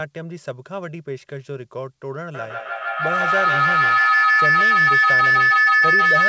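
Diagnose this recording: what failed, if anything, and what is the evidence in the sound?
A tone near 2 kHz swells from 2.34 s to the end, with the loop repeating about every 150 ms and peaking about 11 dB above speech: feedback howl from two same-call devices in one room.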